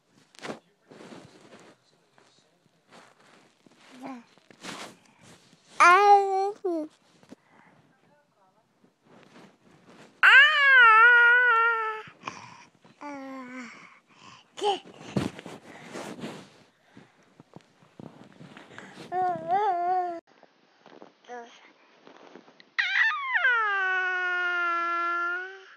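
At 20.19 s the audio drops out for about 80 ms, then returns duller and boxier, a few decibels quieter, with nothing left above 6.5 kHz and a faint new background noise well below the signal. This persists to the end. The likely cause is the input switching to a poorer device: the recording jumped to a different, narrower-band microphone or headset path, which brings its own tone, level and noise floor.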